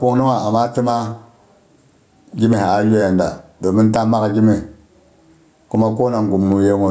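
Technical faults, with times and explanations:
Throughout, gain pumping: the gain swings about 10 dB, pulled down under each loud syllable, squashing loud and soft together. The likely cause is microphone gain set far too high, with a fast limiter pulling it down on each peak.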